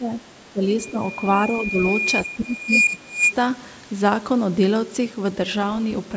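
The speech dips at 0.00–0.13 s and 0.53–0.62 s, by around 10 to 15 dB, and is turned down rather than cut to silence. This is speech suppressed in double talk. The likely cause is an echo canceller that ducks the near talker while the far side speaks.

From 0.78 s a loudspeaker feedback squeal begins: a single steady 2.4 kHz tone that swells over about two seconds until it sits slightly above the speech, then stops at 3.34 s. A noise burst would be broadband, but this is one sustained pitch that grows on its own, which marks it as a feedback loop.

While the squeal is rising, the suppression returns at 0.91–1.01 s and 1.69–1.77 s with short dips of around 10 dB. A much deeper cut of about 30 dB follows from 2.26 to 3.22 s and lasts roughly a second, so the speech there nearly vanishes under the tone.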